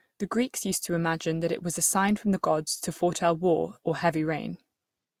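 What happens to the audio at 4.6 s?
At 4.6 s the speech carries the same layered coding artefacts heard across the whole clip, the sound of transcoding between lossy codecs. The mix of different codecs' artefacts heard together is likely a Vorbis encode re-encoded to Opus, which fits roughly 64 then 48 kbit/s. Opus spends bits reproducing the earlier codec's errors and adds its own, and nothing remains above 20.2 kHz.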